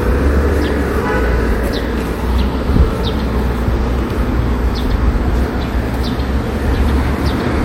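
No technical faults are audible anywhere in the sound.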